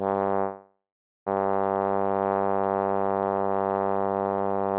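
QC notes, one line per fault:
0.40–1.28 s, call audio freeze: the music stops advancing and its last sound is held as a fading buzz, then about 0.48 s of silence, before playback resumes exactly where it stopped. Nothing is lost, but everything after arrives 0.86 s late, likely because packets stalled and the jitter buffer ran empty. The spectrogram shows a smeared, decaying band, then a blank gap; the waveform tapers to a flat line. Nothing appears above 4 kHz, which fits a G.711 mu-law call codec.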